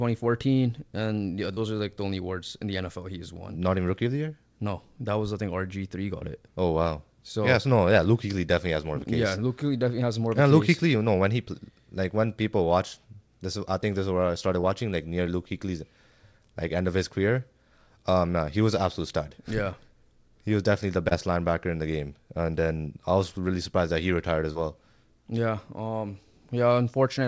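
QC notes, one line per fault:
1.54–1.58 s, 6.19–6.23 s, 14.61–14.65 s, 21.09–21.13 s, 24.53–24.57 s: short concealed packet loss. Each time about 20 ms arrived too late, so the receiver extended the preceding sound and blended back, leaving a brief smear or wobble.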